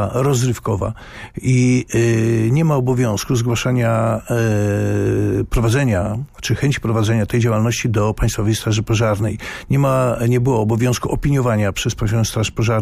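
No technical faults occur at any point in the audio, so there is nothing to place in time order.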